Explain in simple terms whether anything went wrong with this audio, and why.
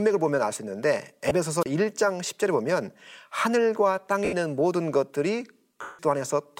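Something did go wrong, in two ways. First, there are lost LE Audio frames: bits of the Bluetooth stream never arrived, so the decoder patched the gaps by replaying the last chunk of sound with its detail scrambled, then fading it. You hear this three times: a tiny 20 ms blip at 1.29–1.31 s, a smeary 80 ms patch at 4.25–4.33 s, and the longest, 170 ms at 5.82–5.99 s, where the speech blurs into noise and sags toward silence.

Second, there's a wireless microphone squelch dropout at about 1.61–1.66 s. The radio signal from the mic weakened enough that the receiver's squelch shut the output off, leaving a hole of roughly 30 ms before the speech came back. Squelch is a gate that mutes the receiver when the signal gets too weak, so the listener gets silence instead of a burst of static. A short drop like this sounds like a brief hiccup or a clipped bit of speech.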